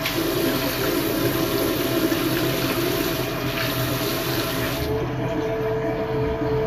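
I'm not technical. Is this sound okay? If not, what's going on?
No. Throughout, the treble sounds grainy and hissy and stops near 14.2 kHz, likely Vorbis compression. Unlike steady background hiss, this graininess rides on the sound itself.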